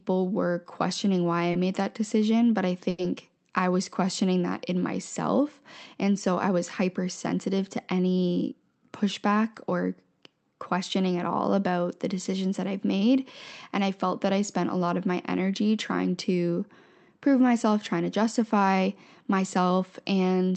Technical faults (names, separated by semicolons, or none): short stall from a late packet; jitter buffer speed-up